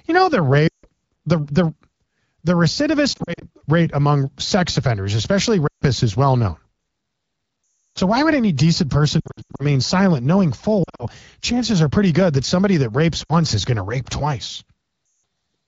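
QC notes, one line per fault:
0.67–15.23 s, lost AMR speech frames: dropouts at 0.67, 3.13, 5.67, 7.9, 9.19, 10.83, 13.24 and 15.05 s. Corrupted frames were concealed by repeating the last good AMR-WB settings with falling gain. Short scattered losses warble. Longer runs drop to near silence, then return rough.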